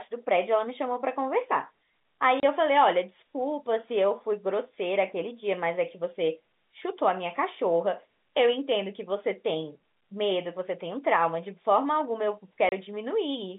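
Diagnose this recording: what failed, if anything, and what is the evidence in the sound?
The failure is in the network stage: packet loss filled with silence. The speech drops out abruptly at 2.40 s and again at 12.69 s, each gap lasting 30 ms, a length that points to a single lost packet each time. On the waveform these are flat silent stretches with vertical edges. On the spectrogram they show as blank vertical stripes across the 150 Hz to 3.6 kHz telephone band.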